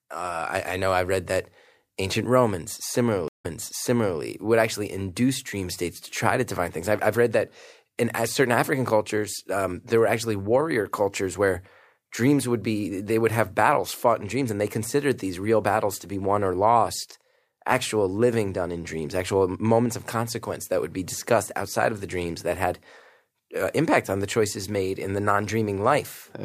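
At 3.28 s the stream connection drops, the player stops, reconnects, and starts a new decoder partway through the stream. The stream reconnect is heard as a gap of 160 ms, after which playback picks up about 0.76 s earlier than where it broke off, so a short stretch of speech is repeated before "would actually induce dream". The disturbance runs until 4.20 s.

At 8.88 s a brief electrical transient, likely from a plug, switch, static discharge or driver glitch, is added to the signal. It is heard as a single loud pop, a sharp click peaking roughly a few decibels above the speech. The speech carries on underneath without a break.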